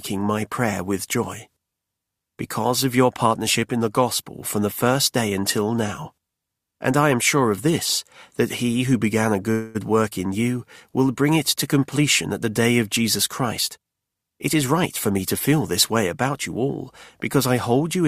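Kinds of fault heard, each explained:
Call audio freeze: held-up packets likely drained the jitter buffer, so at 9.51 s the last sound stretches into a fading buzz or hiss for 0.23 s.
Jitter buffer speed-up: the overfull buffer was trimmed by cutting out pitch-period slices, so 13.42 to 15.19 s plays at 113% speed with unchanged pitch, sounding hurried.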